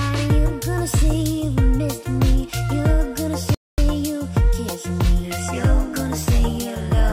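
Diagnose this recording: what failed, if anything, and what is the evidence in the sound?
A playback stall occurs at the playback stage. At 3.55 s the sound cuts to silence in mid-flow and stays silent until 3.78 s, a gap of about 0.24 s, before the audio resumes. The dropout is abrupt at both edges, with nothing filling the gap. The likely cause is the player running short of data or having its output thread blocked, so nothing reached the output until it recovered.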